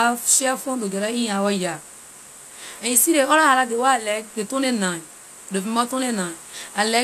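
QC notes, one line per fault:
No faults were found in this clip. Nothing here calls for a QC note.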